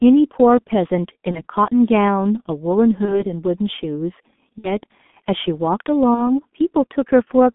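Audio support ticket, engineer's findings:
Speech band-limited to roughly 200 Hz–3.5 kHz, dull and hoarse, consonants smeared throughout. G.723.1 codec, heavy coding damage consistent with its 6.3 kbit/s mode: coarse 30 ms frames and a slowly updated vocal-tract model lose high-frequency detail and fast articulation.

Four short buzzy or noisy smears at 1.31–1.42 s, 3.05–3.23 s, 4.58–4.78 s and 6.14–6.32 s. VoIP packet loss concealed by the speech codec. The decoder repeats the last pitch and filter with falling gain; recovery lags for several frames. Gaps fit about 30 ms lost, 60 ms at 4.58 s.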